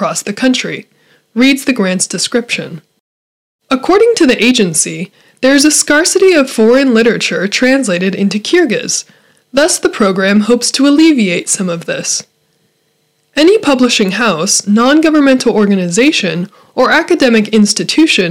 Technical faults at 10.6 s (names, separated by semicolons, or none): hard clipping